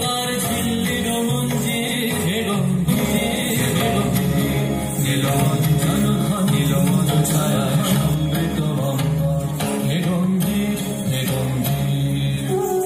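From 2.88 s to 8.14 s there's a doubled audio track: a second, equally loud copy trails the original by roughly a second and a half, dry and full-band, cutting in and out abruptly. It's likely a second capture path running late, mixed in alongside the first.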